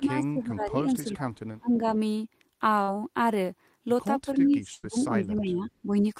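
Speech with four kinds of transmission fault. Speech suppressed in double talk, at 0.0–1.27 s, 1.59–1.94 s and 4.25–5.95 s: the voice dips by roughly 15 dB, and by about 25 dB in the middle stretch, likely because an echo canceller turned it down while the far side talked. Short concealed packet loss, at 0.33–0.37 s and 2.83–2.89 s: about 20 ms and then 40 ms of audio went missing and were bridged by extending the preceding sound, leaving a brief smear. Echo leak, at 1.35–1.39 s: a very faint copy of the voice, well below the speech, returns about 326 ms late, likely from loudspeaker pickup the far end did not cancel. Burst of packet loss, at 4.75–4.85 s: about 80 ms is lost, and the last sound is held and faded before the audio resumes further on.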